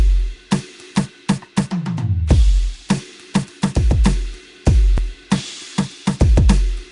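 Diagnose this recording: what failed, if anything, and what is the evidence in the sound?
Codec stage. The music sounds rough, hissy and smeared, with nothing above 10.6 kHz. This is likely Nellymoser compression, which fills starved bands with noise.

Buffer stage. Overlapping chunks cause brief stutters at 0.96, 2.97 and 4.98 s, spaced 2 s apart. Each chunk starts early, so about 7 ms plays twice.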